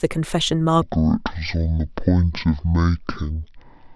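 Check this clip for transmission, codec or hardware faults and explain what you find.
A section at the wrong speed runs from 0.82 s to the end at 3.96 s, likely from playback against a mismatched clock, so the speech plays at 0.506 times its recorded rate. Speed and pitch fall together: the speech drops about ten semitones, turning deep, slow and drawn out.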